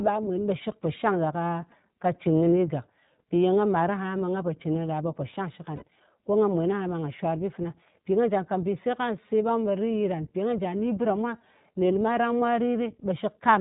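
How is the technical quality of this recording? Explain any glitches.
The technical quality is limited by a narrowband, lossy speech codec, and there is one short dropout.

Across the whole recording the speech sounds boxed-in and slightly rough and synthetic, with plainly audible coding damage and no content above 4 kHz. That points to the iLBC codec, likely at its 20 ms frame mode around 15.2 kbps, rebuilding each frame's excitation independently.

From 5.76 to 5.83 s the sound briefly smears into a held, faintly buzzy vowel. These are lost iLBC frames, about 60 ms, which fits three missing 20 ms frames. The decoder repeats the last pitch cycle mixed with noise, then recovers almost at once.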